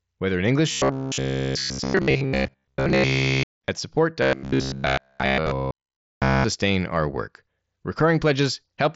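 From 0.71 to 3.68 s the sound turns into a rigid, metallic buzz at 66.7 Hz. This is robotic sound from repeated short buffers, likely caused by audio arriving too seldom. Most of this stretch is a repeated chunk of about 15 ms, and the real audio is skipped.

At 3.42 s there is concealed Bluetooth headset packet loss. About 30 ms went missing, spread over 60 ms, with runs up to 15 ms. The receiver patched the gaps from recent waveform.

From 4.22 to 6.44 s the same 66.7 Hz robotic buzz returns. All of it is looped repeats, likely from starved buffers.

From 5.40 to 5.47 s a longer loss of about 67.5 ms is concealed. It sounds like a held, buzzy tone at full level, which points to about nine headset frames dropped.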